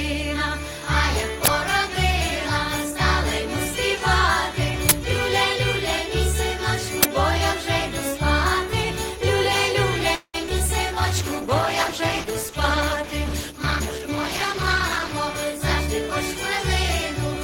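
The audio has four kinds of technical fault. Three uninitialised buffer bursts occur at 1.45 to 1.48 s, 4.89 to 4.91 s and 7.03 to 7.05 s. Each is a loud blast of digital noise lasting about 23 ms. Stale memory was played as samples, and the length fits a 1024-sample block. From 10.15 to 10.62 s, repeated packet loss gives a choppy, robotic sound. There are four gaps, the longest 191 ms. Each one is patched by stretching the last sound, and about half the span is concealed this way. A call bitrate drop follows from 10.93 to 15.2 s. The sound turns rough and watery. The coarser coding points to the encoder falling from around 32 kbps to 12 kbps after the bandwidth estimate collapsed. Inside that stretch, from 13.73 to 14.07 s, a jitter buffer speed-up plays the audio at 117 percent speed without changing pitch. Short pitch-period pieces, roughly 70 ms in total, were cut to shrink the backlog, so the passage sounds hurried.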